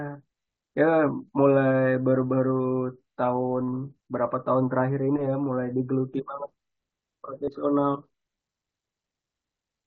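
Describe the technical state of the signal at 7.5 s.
Concealed Bluetooth headset packet loss sits at 7.45 to 7.48 s. About 22.5 ms of headset audio never arrived, which fits roughly three lost packets, and the receiver patched the hole by repeating the best-matching stretch of the preceding waveform. It gives a brief buzzy held tone and a slight warble as real sound resumes.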